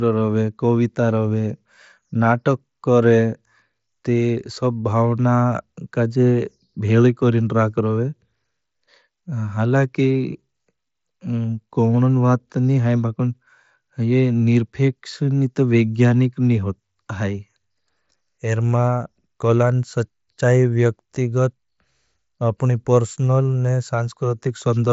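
No technical faults can be heard in this speech.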